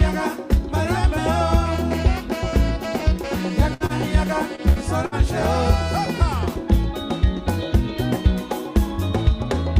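Three bursts of packet loss hit at 3.74, 4.70 and 5.06 s: each time the last sound is stretched and faded for about 60 ms, then the audio jumps ahead with roughly 60 ms gone. There are also two short stalls from a late packet, at 3.86 and 4.55 s, where the jitter buffer ran dry and a sound is held for about 34 and 26 ms before carrying on from the same spot, with nothing actually lost.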